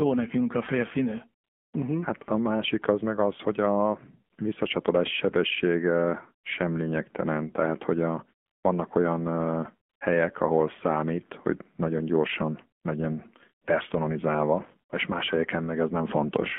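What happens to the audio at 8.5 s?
From 8.46 to 8.64 s, just after "lényegtelen tehát hogy a" and before "olyan ö helyek ahol", the real background drops out and a smooth, even hiss takes its place. This is AMR comfort noise: the phone judged the line silent and sent no speech frames for about 180 ms, so the receiver filled that gap with synthetic noise built from a rough level and spectrum description.

Around this moment the sound is also thin, boxy and buzzy, confined to roughly 200 Hz to 3.4 kHz with nothing above. That is the AMR narrowband mobile codec at 7.4 kbps, which rebuilds the signal from a coarse vocal-tract model excited by a few pulses per frame.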